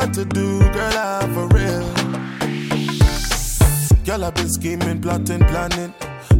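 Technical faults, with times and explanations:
No technical faults can be heard anywhere in the audio.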